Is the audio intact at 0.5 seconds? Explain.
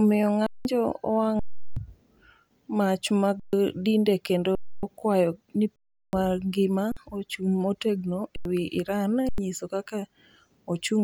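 No. From 0.46 to 0.65 s the speech stops dead and the waveform freezes flat. This is an underrun with held sample: the output buffer emptied, the converter held its last value for about 186 ms (consistent with an 8192-sample gap), and roughly a fifth of a second of live audio was lost.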